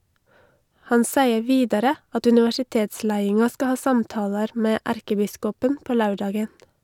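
From 0.15 s to 6.64 s, periodic USB or driver dropouts recur every 0.5 s. Each stall skips a tiny fraction of a millisecond of speech, leaving a tick. The strict half-second spacing, and ticks that vanish in pauses, set it apart from random clicks.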